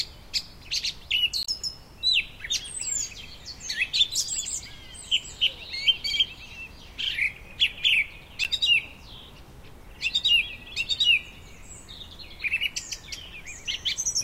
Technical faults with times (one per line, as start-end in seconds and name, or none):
1.41-1.48 damaged data in a compressed stream
8.44-8.47 damaged data in a compressed stream